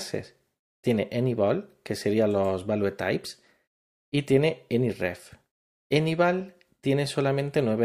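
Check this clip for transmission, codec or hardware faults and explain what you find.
Checking this clip turns up no faults to explain.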